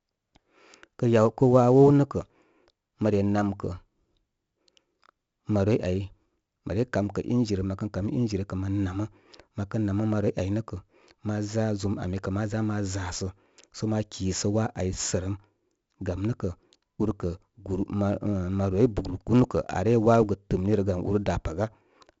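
Throughout the speech, 4-bit ADPCM compression adds a gritty hiss that rises and falls with the voice and is heaviest on loud syllables and sharp onsets. Unlike steady background hiss, it vanishes in pauses. Nothing above about 7.7 kHz, fitting a 64 kbps stream at a 16 kHz rate.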